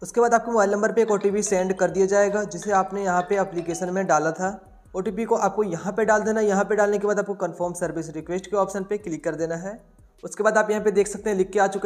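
No technical faults can be heard anywhere in the audio.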